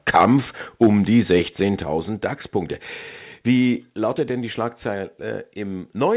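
Right at the start, 0.15 to 0.26 s, there's microphone overload: the peaks push about 4 dB past full scale and a few percent of samples get flattened, most likely from the input gain being set too hot, so the loud syllables pick up a harsh, crackly edge. It happens again at 0.82 to 0.87 s, about 4 dB over, and this time around a tenth of the samples are clipped, so the crackle is more obvious.

Right inside that second burst, at 0.84 s, the microphone volume steps down by about 2 dB, likely the call software reacting to the clipping and pulling the device gain back. Voice and background drop together in one step. It steps down again at 1.83 s, by about 4 dB, and once more at 3.9 s, another 4 dB, just before "lautet denn die". Each time the whole level drops at once. On the G.711 A-law call path, nothing comes through above 4 kHz, so the audio is also band-limited.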